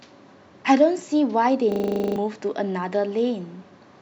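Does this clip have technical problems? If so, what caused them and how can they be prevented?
Yes. A system hang loop: from 1.72 to 2.16 s the system froze while the audio hardware kept replaying one 40 ms ring buffer, so a single fragment of speech repeats 11 times as a rapid 25 Hz stutter, and close to half a second of speech is lost. Preventing it means keeping the audio driver and real-time thread free of stalls, with a watchdog that mutes output rather than recycling a stale buffer.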